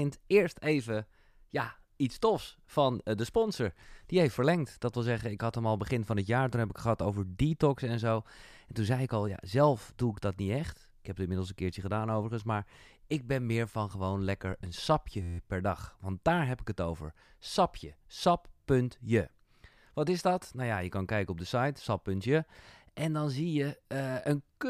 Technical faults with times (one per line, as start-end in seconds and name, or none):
15.22-15.38 system hang loop